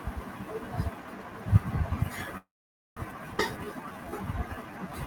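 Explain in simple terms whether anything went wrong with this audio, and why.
Several things go wrong from about the middle of this speech clip onward.

From 2.37 to 2.99 s there is a call audio freeze. The sound stalls for about 0.6 s, briefly carrying on the last sound and then going almost silent for half a second. The likely cause is that network packets were held up and the receiver's small waiting store ran dry. When they arrive, the speech picks up exactly where it stopped. Unlike a skip, nothing is lost; the talk is just pushed later.

Right after, at 3.39 to 3.41 s, comes a skip ahead. Here the opposite happens: roughly a fifth of a second of speech simply vanishes, and the two sides are joined with almost no pause. That is what tells it apart from the freeze. There is no waiting or fading, just a sudden jump forward where part of what was said is missing.

From 3.57 s to the end, a jitter buffer slow-down sets in. 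The receiver rebuilds its reserve by repeating tiny slices of the sound, stretching the last stretch by about 190 ms. Speech plays at about 88% speed with drawn-out sounds. Because the pitch stays the same, it doesn't sound like a slowed tape going deeper. It sounds like speech being lazily stretched, unlike the abrupt stop or jump earlier.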